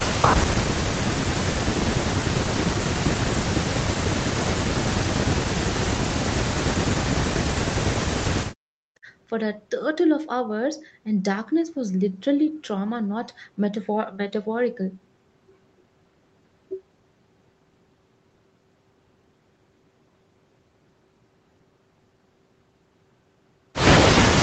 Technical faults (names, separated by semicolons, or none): speech suppressed in double talk